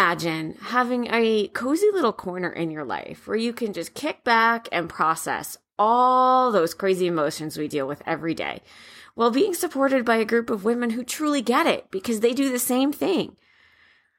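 No technical faults can be heard anywhere in the recording; the signal stays steady and intact throughout.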